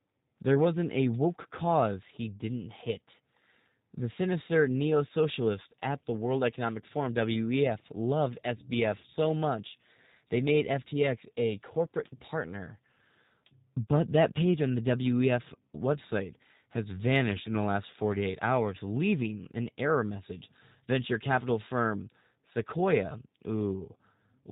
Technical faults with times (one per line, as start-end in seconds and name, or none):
0.00-24.51 G.729 codec